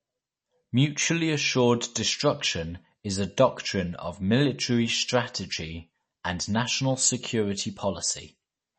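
Throughout the speech, MP3 compression damage is plainly audible: nothing above 8.3 kHz, with watery, swirling sibilants and smeared consonants, likely from a low bitrate near 32 kbps.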